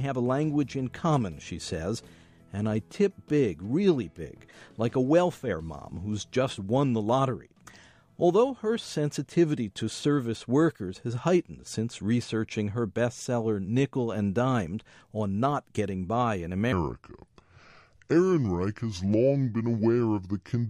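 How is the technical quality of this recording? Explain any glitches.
The recording has one clear glitch, concentrated at the very end. From 16.72 s to the end, a section plays at the wrong speed: it runs at 0.737 times its proper rate, so everything slows and drops about five semitones together. The likely cause is the section being played against the wrong clock rate. It sounds abruptly deeper and sluggish. On a spectrogram, every harmonic steps down at 16.72 s. In the waveform, the amplitude envelope stretches out, with events spaced noticeably wider.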